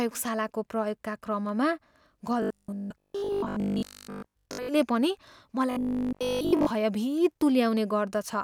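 From 2.42 to 4.68 s, and again from 5.71 to 6.73 s, the speech turns into a stiff, metallic drone: robotic sound from repeated short buffers. It's likely that audio stopped arriving in time and the same 20 ms chunk kept getting replayed in place of most of the real signal. That loop stamps a fixed 50 Hz buzz over the speech, which still tracks the phrasing loosely.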